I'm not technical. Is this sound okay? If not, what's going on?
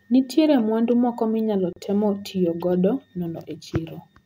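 No. At 1.73 seconds the speech briefly falls silent for about 36 milliseconds, then carries on exactly where it stopped. This is a gap at a join of encoded pieces: two separately processed sections were stuck together, leaving padding between them. Unlike a dropout, no sound goes missing.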